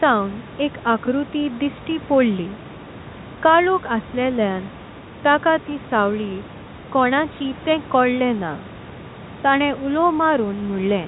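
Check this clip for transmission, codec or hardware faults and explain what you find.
Nothing here points to a transmission, codec or hardware problem; the narrow telephone-band sound is just what ordinary G.711 phone coding does, and the room noise sitting about 20 dB under the speech belongs to the recording itself.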